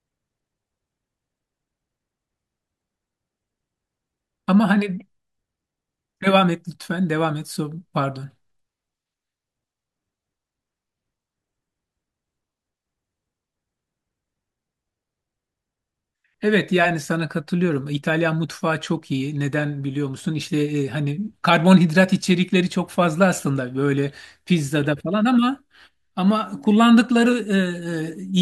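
No technical faults can be heard anywhere in the recording; the signal stays continuous and stable throughout.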